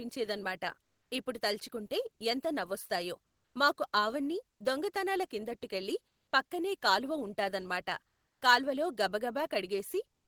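Comfort noise in place of the background at 0.82, 3.24, 4.50, 6.07, 8.07 and 10.12 s: each pause of 0.1 to 0.34 s becomes steady, featureless hiss within about 3 dB of the real background, likely from Opus DTX.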